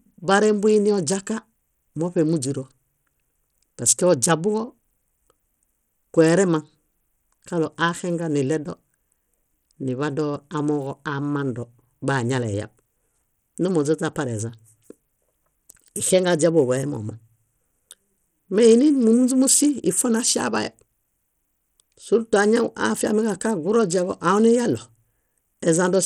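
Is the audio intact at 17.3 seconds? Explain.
No. At 17.3 s the speech carries the same damage heard across the whole clip: Bluetooth SBC compression, likely from a low-bitrate link, with the sound pointing to roughly 80 kbps. SBC splits the signal into a few wide sub-bands and allocates bits without a hearing model, so the quieter upper bands are starved and coarsely quantised. The result is plainly audible: unstable, flickering treble with gritty noise and aliasing, and nothing present above 19.5 kHz.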